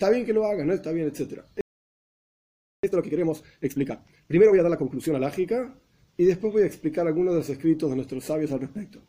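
At 1.61 s the sound cuts to silence in mid-flow and stays silent for about 1.23 s, until 2.83 s. This playback stall likely comes from the player running out of buffered data, or its output thread being blocked, before it resumed.

From 2.83 s to 5.27 s the audio rushes along at 1.5 times normal speed, yet its pitch stays put. This is time-compressed catch-up: the player works off its backlog by cutting out small pieces and cross-fading the joins.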